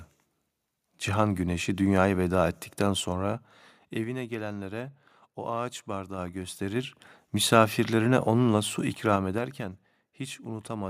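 A ticking, stepped zipping rides on the speech from 2.88 to 4.37 s, 6.04 to 7.34 s and 8.82 to 9.75 s. This is zipper noise: the level falls about 15 dB, rises about 15 dB, then falls about 10 dB in unsmoothed 3 dB jumps, roughly three to four a second.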